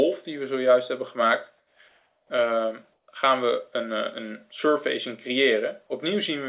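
From 1.58 to 1.79 s, 1.88 to 2.30 s and 2.93 to 3.08 s the real background gives way to comfort noise, a steady featureless hiss, about 6, 1 and 3 dB quieter. It is likely discontinuous transmission, and unlike a gate or dropout the pauses never fall silent.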